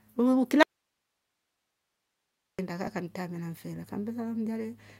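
Audio dropout to a faint residue, 0.63–2.59 s: speech cuts abruptly to faint hiss, likely a lost source on a live path, before "kaa kamtamira mfele".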